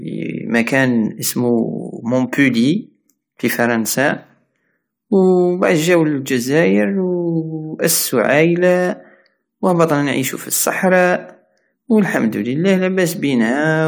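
No technical faults are audible anywhere in the speech.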